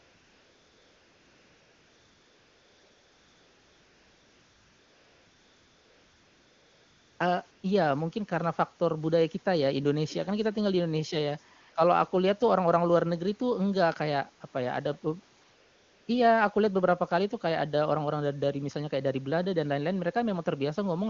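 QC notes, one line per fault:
0.0–7.19 s, 7.51–7.63 s, 11.61–11.75 s, 15.43–16.07 s: AMR comfort noise. No speech frames arrive during these pauses, so the receiver substitutes smooth, steady synthetic hiss that switches in and out abruptly. A real background would fluctuate and fade naturally rather than toggling like this.
10.09–10.26 s: echo leak. A brief, very faint copy of the speech returns about 334 ms after the original. This is likely loudspeaker pickup at the far end that the echo canceller did not fully remove. It is a distinct delayed repeat, not reverberant smearing or a codec artefact.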